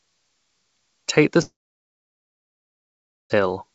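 A speech clip with a long network dropout from 1.42 s to 3.32 s: the sound breaks off and the gap is briefly filled with a fading buzz before about 1.8 s of near-silence, likely caused by lost packets, after which the speech resumes with that portion gone. Throughout, the audio is band-limited at 8 kHz, consistent with a G.722 call codec at 64 kbps.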